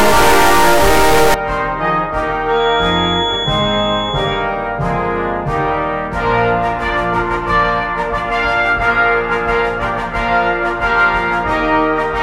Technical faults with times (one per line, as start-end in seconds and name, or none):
0.00-1.34 stuck bit
2.45-4.50 feedback whistle